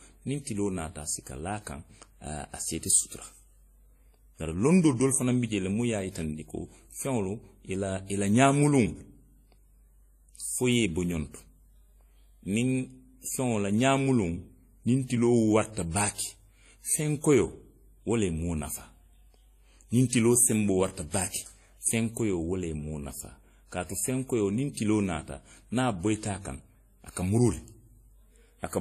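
All the way through the speech, nothing comes through above 14.1 kHz, and two different flavours of codec smear sit on top of each other. That's likely transcoding between lossy codecs, which fits a low-rate WMA encode later re-squeezed into AAC-LC.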